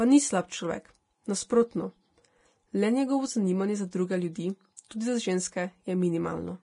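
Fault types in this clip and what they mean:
Vorbis compression: Heard throughout the speech, with nothing above 10.6 kHz and heavy codec damage: hissy, grainy treble, roughened tones and blurred consonant onsets. The likely cause is low-quality Vorbis encoding, which fits a rate of around 30 kbps. At that rate the encoder lowers its cut-off and quantises the upper bands so coarsely that fine detail is replaced by noise of similar energy laid over a smooth spectral floor.
pre-echo: From 3.91 to 3.93 s, just after "zanimanje za", and again from 4.76 to 4.79 s, a short hiss arrives 20 and 23 ms ahead of a sharp onset, which then sounds softened and smeared. A transform codec spreads quantisation noise evenly across each block, so when an attack falls late in a block, noise sized for the loud part also fills the quiet moment before it.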